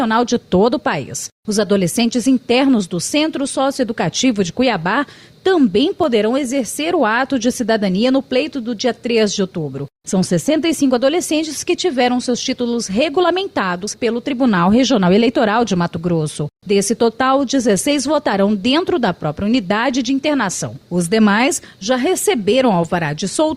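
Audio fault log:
0.46–23.14 s, clock slip clicks: faint regular ticks, around fifty of them at roughly 0.4 s intervals, each consistent with a single dropped or repeated sample. The likely cause is two unsynchronised device clocks drifting apart, a spacing that fits an error near 50 ppm.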